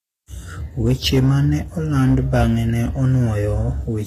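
Throughout the speech, sibilants sound gritty and metallic, and nothing reaches above about 14.9 kHz. The likely cause is HE-AAC compression at a low bitrate, around 24 kbps. The upper band is rebuilt by spectral band replication from copied lower bands, so its harmonics no longer line up with the real ones.

From 0.87 to 1.38 s and again from 1.97 to 2.50 s, hard clipping distorts the louder syllables. Peaks overdriven by about 5 and 6 dB are cut flat, and the squared tops spray harmonics high into the spectrum.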